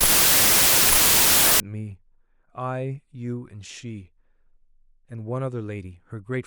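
From the start to 1.60 s the speech sits under a loud wash of harsh noise, slowed to about 0.75 times its proper speed with the pitch dropped to match. This is a wrong sample width fault: the audio points to samples written as 32-bit integers but read as packed 24-bit ones, so bytes from neighbouring samples merge into false values. Only some values keep the real signal's top bits. The extra samples stretch playback, and that slowdown distinguishes it from a byte-order error, which garbles sound without changing speed.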